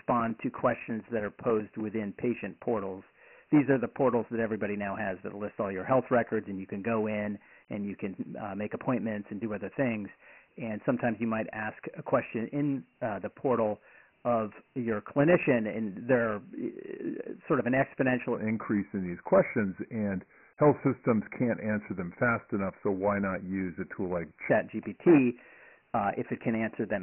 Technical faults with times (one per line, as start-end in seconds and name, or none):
0.00-27.02 Dialogic VOX ADPCM
0.10-1.90 periodic USB or driver dropouts
18.35-24.50 section at the wrong speed